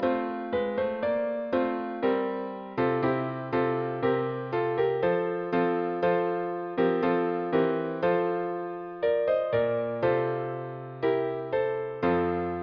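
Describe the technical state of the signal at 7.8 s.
At 7.8 s the signal is intact, with no audible fault at that moment.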